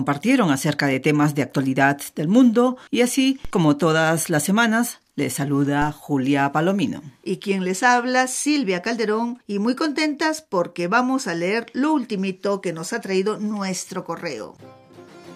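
A low thump sounds at 3.45 s and again at 5.82 s, with the audio itself carrying on unchanged. These are DC steps: the waveform's zero line jumps by about -20 dBFS and then drains away through a roughly 5 Hz high-pass.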